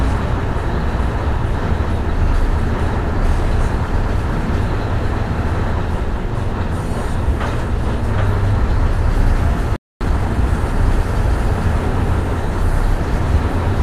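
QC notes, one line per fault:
9.76–10.01 s, playback stall: the player likely ran dry of data or was blocked, so output falls silent for about 0.25 s mid-flow before resuming.
10.01–10.49 s, time-compressed catch-up: the player trims its backlog by splicing out short pieces, so the sound runs 1.5 times fast at unchanged pitch.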